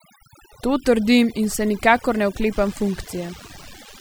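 A short speech recording carries overdone noise removal from start to finish. The noise reducer was set far too aggressively, so any frequency band sitting close to its noise estimate is pulled down or gated out entirely. Quiet low-level parts of the voice are removed along with the noise. Between phrases the background collapses to near silence dotted with twinkling musical specks where isolated bands briefly pop back through. From 2.53 s to the end of the clip a DECT cordless phone buzz is added. A nearby DECT handset or base station transmits a radio burst every 10 ms, and the audio circuitry rectifies it into a steady, thin buzz at 100 Hz with a dense stack of harmonics. It sits roughly 25 dB below the speech.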